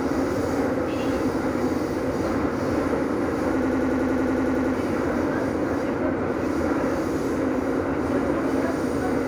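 From 3.62 to 4.74 s a system hang loop occurs: the host stalled while the hardware kept replaying one 92.9 ms buffer, which fits a 4096-sample ring buffer. It repeats 12 times, a machine-gun stutter at 10.8 Hz, and about a second of audio is lost.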